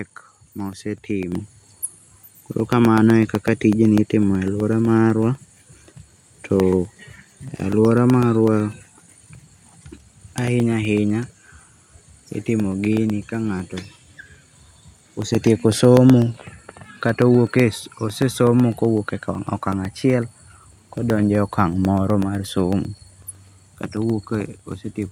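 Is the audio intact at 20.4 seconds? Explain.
No. At 20.4 seconds the clip is inside a run of periodic USB or driver dropouts lasting from 0.10 to 24.97 s. Every 0.125 s, roughly a millisecond of audio drops to silence. The gaps are heard as regular ticks while speech is sounding.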